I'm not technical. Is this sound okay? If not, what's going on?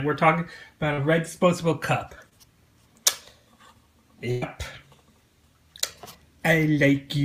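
No, there are three short dropouts.

Twice, at 0.93 s and 2.29 s, there is a short concealed packet loss. A tiny piece of the sound, about 40 ms the first time and about 20 ms the second, didn't arrive in time to be played. The receiver patched each hole by stretching out the last sound it had and then blending back into the real audio. You hear a quick smear or wobble.

At 4.31 s there is a burst of packet loss. Several pieces in a row, about a tenth of a second in total, never arrived. The receiver covered the hole for about 105 ms by holding on to the last sound and letting it fade, so there is no silence. You hear a short held buzz or fading hiss, and then the sound picks up a little further on, with that part missing.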